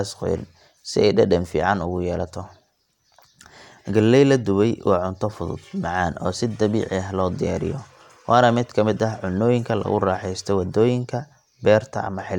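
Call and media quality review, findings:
No technical faults found in the speech signal; level, continuity and timing hold steady throughout, with nothing in the audio path requiring follow-up.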